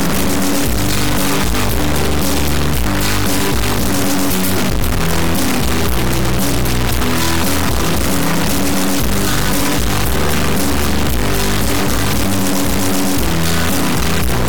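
Integer read as float runs from start to finish of the clip. The samples were stored as 32-bit integers but are being interpreted as 32-bit floating-point values, so each bit pattern decodes to a number that bears no sensible relation to the original waveform: some land near zero, others enormously past full scale or invalid. The output therefore snaps between silence and hard clipping, heard as a harsh, extremely loud square-wave buzz that falls away to nothing in the quietest stretches.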